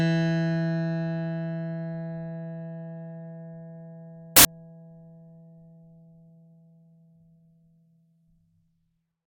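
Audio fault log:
4.37 to 4.45 s, samples built from the wrong bytes: for about 80 ms the music gives way to a burst of loud, harsh broadband noise, because each sample is assembled from misaligned or swapped bytes, so the rapidly changing low-order bits end up driving the waveform. Unlike a dropout it adds sound rather than removing it.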